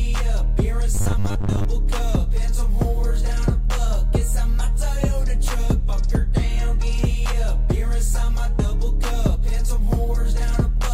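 From 0.95 to 1.65 s the sound becomes a rigid 100 Hz robotic buzz from repeated short buffers, likely 10 ms chunks replayed for about half the time. Unlike a dropout, it never goes silent.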